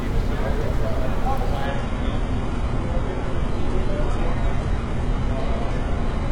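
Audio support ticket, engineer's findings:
Adaptive stream at a lower bitrate from 1.66 s to end: abrupt quality step with no gap, nothing above 11.3 kHz, synthetic-sounding treble and rising artefacts. Fits a player switching to a very low-bitrate rendition with spectral band replication. Not a dropout or plain low-pass filter.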